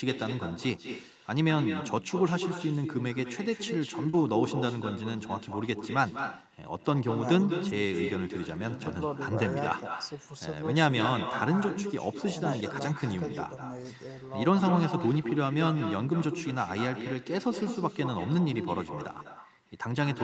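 Echo with no canceller runs through the whole clip. The far end played the speech on a loudspeaker, and its microphone sent it back unremoved. A copy about 8 dB quieter trails each phrase by roughly a fifth of a second. It sounds thin.

At 4.09 s there is short concealed packet loss. About 40 ms of audio arrived too late to decode. The receiver filled 36 ms by extending the preceding sound, then blended back in. It is heard as a brief smear or wobble.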